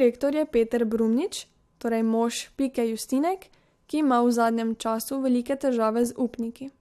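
A short bit of speech with nothing technically wrong to point to anywhere in it.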